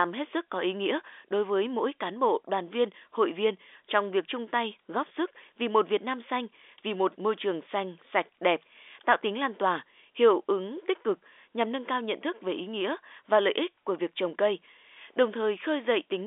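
No technical faults are audible in this telephone-band speech.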